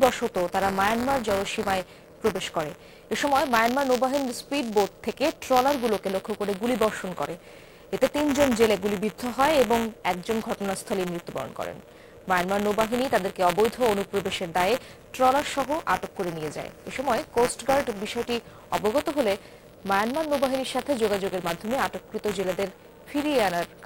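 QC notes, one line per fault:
throughout, buffer tearing: writer and reader have slipped, so a sliver of each buffer replays audio about 20 ms old, giving a steady 172 Hz rattle, which fits a 256-sample buffer.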